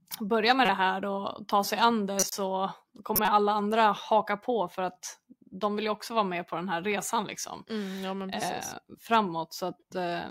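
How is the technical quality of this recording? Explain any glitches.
The recording has audible faults: three short decoding glitches and one pop.

Corrupt frames decoded occur at 0.63–0.69 s, just before "det här och ta", at 2.19–2.32 s, and at 3.15–3.28 s, before "andra haka på för". Damaged bits in a few compressed frames were played anyway, scattering energy to wrong frequencies, heard as brief chirpy noise bursts over the speech.

A loud pop lands at 6.92–6.94 s, right after "med på den här". A sudden voltage step, likely from a plug, switch or static discharge, adds a single sharp pop that peaks somewhat above the speech level while the speech continues underneath.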